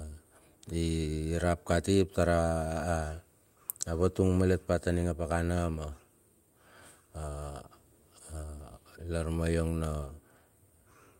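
No technical faults can be heard in this recording.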